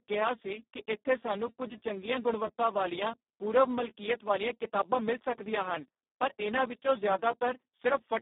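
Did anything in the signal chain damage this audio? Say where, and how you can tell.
Yes. The damage is at the codec stage, across the whole clip. This is Speex codec damage: the speech sounds hoarse and noisy, which fits a very low setting near 4 kbps. The band runs about 200 Hz to 3.7 kHz, with nothing above 3.8 kHz.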